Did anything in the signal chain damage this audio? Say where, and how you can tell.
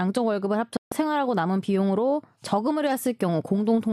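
Yes. There is a digital broadcast dropout at the reception and decoding stage, from 0.77 to 0.92 s. The speech mutes for about 144 ms after a 3 ms fade and resumes further along, so the material in between is lost rather than delayed. The receiver stopped getting frames that passed their checks and muted until valid ones returned. The gap fits about six lost frames. A waveform shows a flat, near-zero gap, and a spectrogram shows a clean vertical blank across all frequencies.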